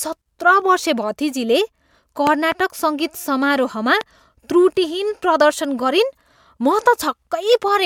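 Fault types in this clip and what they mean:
Loud pop: a sharp thump laid over the speech, likely from an electrical pulse such as a switch or static discharge. A double pop spans 2.27 to 2.54 s, well above the speech level, and a single, weaker pop is at 4.01 s. Unlike a dropout, the speech continues underneath.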